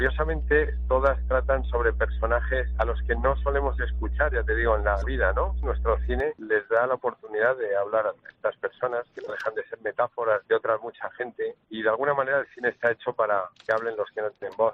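A steady low tone sits under the audio from the start to about 6.2 s, then stops. This is mains hum at 60 Hz. It is loud, close to the level of the wanted sound rather than buried beneath it. The hum comes from the power line leaking into the signal path, through a ground loop or a nearby transformer.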